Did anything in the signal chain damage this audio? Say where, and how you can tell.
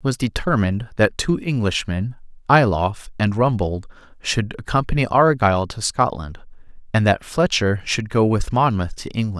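No, nothing in this speech recording stood out on listening as damage from any stage of the signal chain.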